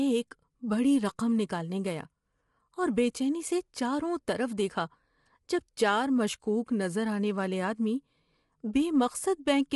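Throughout, the speech sounds rough and grainy, with noise between harmonics and nothing above 11.6 kHz, which points to low-delay AAC compression, likely AAC-ELD at around 32 kbps, rather than plain low-pass filtering.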